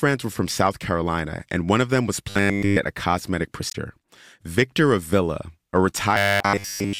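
From 2.30 to 2.77 s the speech turns into a rigid, metallic 100 Hz buzz. That's robotic sound from repeated short buffers: new audio likely arrived too seldom, so the player looped roughly the last 10 ms over and over instead of playing fresh material.

At 3.67 to 3.75 s there's a short glitch from damaged data in a compressed stream. The decoder hit bad frames there, lost sync and had to hunt for the next frame header, so the sound glitches briefly.

From 6.15 s to the end, the same looping likely takes over again, with a fixed 100 Hz buzz and essentially no fresh audio getting through.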